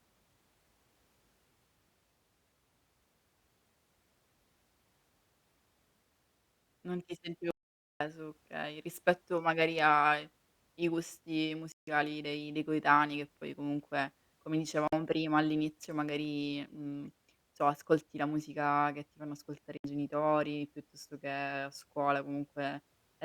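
At 7.51 s the speech drops out to silence for about half a second, ending at 8.01 s just before "okay rispetto magari ai". This is an audio dropout to silence, likely from the input signal being lost while the recorder kept writing silence. No room tone survives in the gap, so on a waveform the trace collapses to a flat line, and a spectrogram shows a clean, empty vertical band with hard edges on both sides.

Three shorter gaps follow, each a Bluetooth stall, likely caused by delayed packets leaving the headphone buffer empty until playback could resume. The first runs from 11.72 to 11.88 s, about 154 ms, between "magari ai i gusti" and "dei dei coetanei che". The second, near 14.88 s, lasts about 49 ms. The third, from 19.77 to 19.84 s, about 69 ms, falls between "che ti fanno ascoltare" and "genitori piuttosto che a". Each sounds like a brief hiccup before the speech carries on. They appear as narrow blank slices in the spectrogram and short flat stretches in the waveform.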